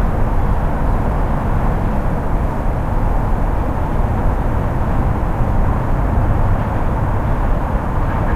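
No technical faults can be heard in this recording.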